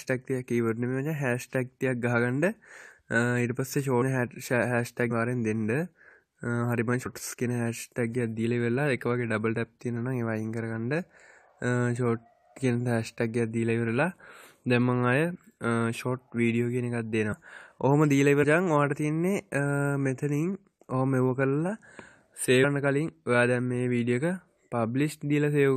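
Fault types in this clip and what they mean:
Compressed frames skipped: Whole blocks of coded audio are never played, so the sound jumps ahead between about 150 and 400 milliseconds. Each of the six joins is brief.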